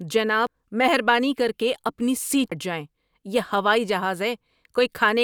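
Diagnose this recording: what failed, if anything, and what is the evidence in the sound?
The codec stage failed: compressed frames were skipped, either missing from the file or rejected by the decoder as damaged. At 0.47 s and 2.52 s the speech jumps ahead by roughly 300 ms, which fits about four 85.3 ms frames.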